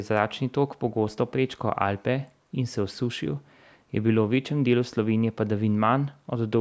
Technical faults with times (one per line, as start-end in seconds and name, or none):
none